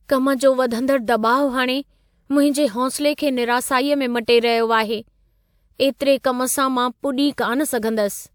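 The clip is speech, and no technical fault can be heard in it. There is nothing to mark with a time or trace to a cause.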